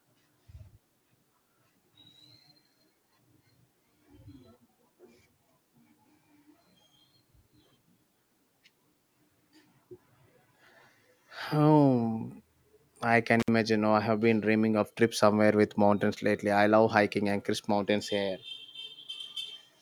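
An intermittent contact at 13.40 to 13.48 s, just after "I can" in this speech recording: a loose connection opens for about 63 ms, dropping the signal to faint hiss with crackle at both edges.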